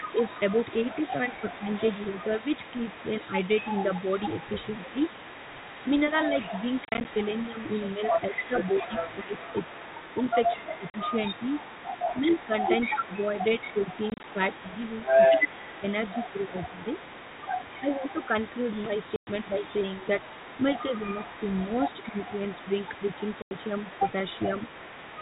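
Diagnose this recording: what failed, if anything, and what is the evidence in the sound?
A faint, delayed double of the speech trails it for the whole clip, arriving about 222 ms late and roughly 20 dB down. This is an echo leak in call processing, likely a loudspeaker echo canceller at the far end letting its microphone pickup back into the return path.

The speech sinks in short, uneven dips: shallow ones of a few dB between 0.22 and 2.15 s, then deeper ones of up to about 15 dB between 8.29 and 22.15 s, around two seconds in all. This is speech suppressed in double talk, likely the echo canceller ducking the signal when it cannot separate the talker from the echo.

Abrupt, hard-edged holes break the audio at 6.85–7.05 s (scattered, runs up to 30 ms), 10.9–10.94 s, 14.1–14.24 s (scattered), 19.16–19.27 s and 23.42–23.51 s. This is packet loss filled with silence on the network. Gap lengths in 10 ms steps fit 10 ms packets.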